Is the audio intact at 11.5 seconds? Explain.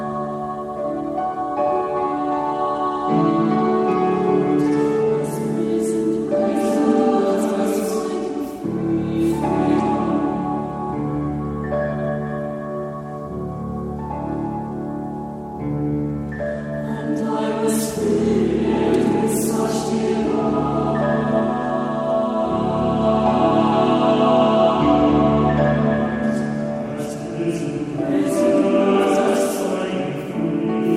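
No. Periodic clock jitter runs throughout, shaking the converter clock at around 100 Hz and adding sidebands that give a rough, metallic edge. Unlike hum, it vanishes in silence.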